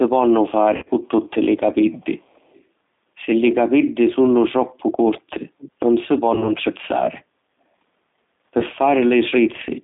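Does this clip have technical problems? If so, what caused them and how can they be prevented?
Yes, there are four kinds of fault.

G.729 codec: the whole clip carries the plainly audible damage of G.729 at 8 kbit/s. The speech is rebuilt from a vocal tract filter, a pitch predictor and a few pulses per frame, so it sounds rough and synthetic, confined to about 200 Hz to 3.7 kHz. A spectrogram shows a hard ceiling near 3.7 kHz with nothing above and smeared, grainy harmonics below. Preventing this means negotiating a wideband codec such as Opus or G.722 instead.

VoIP packet loss concealed by the speech codec: at 0.76 to 0.89 s about 90 ms was lost over roughly 100 ms, the longest run 60 ms. Shorter losses follow at 6.35 to 6.52 s (30 ms) and 8.60 to 8.63 s (10 ms). Each time the decoder stretched its last pitch and filter into a fading buzzy tone or coloured noise, and the speech stays weak briefly afterwards. 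The waveform shows smooth, decaying repetitive cycles, and the spectrogram shows frozen harmonics instead of moving formants. A steadier network path, priority marking for voice traffic and a jitter buffer with forward error correction would prevent it.

Echo leak: from 1.91 to 2.63 s a very faint delayed copy of the speech appears, lagging by 294 ms and sitting far below the main speech. The likely cause is a loudspeaker on one side whose echo canceller let part of its microphone pickup back into the call. On a spectrogram it shows as a weak, time-shifted ghost of the preceding formant pattern, easily missed in the waveform. A headset or better echo cancellation at that end would prevent it.

Speech suppressed in double talk: between 4.19 and 5.8 s, for about 1.5 s in total, the speech dips, the deepest drops around 35 dB. This is likely an echo canceller turning down both talkers while both spoke at once. 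The waveform shows sudden notches in the envelope, and the spectrogram shows level drops within otherwise continuous speech. A full-duplex echo canceller with better double-talk detection, or headsets, would prevent it.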